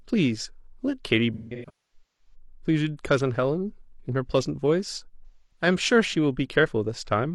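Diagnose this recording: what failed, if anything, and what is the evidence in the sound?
The failure is AAC frame loss with concealment, at the codec stage after transport. From 1.34 to 2.34 s the speech turns smeared and phasey in scattered patches. About 0.73 s of audio is missing across roughly 0.85 s, and the longest gap lasts around 0.3 s. A second patch runs from 5.26 to 5.66 s, with about 0.26 s gone. The decoder fills each gap by reusing the last good spectrum, so the sound turns noisy and smeared rather than cutting out.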